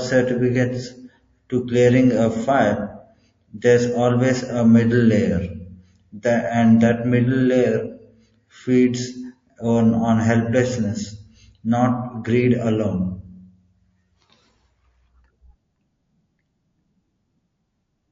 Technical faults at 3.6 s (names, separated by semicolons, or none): MP3 compression; pre-echo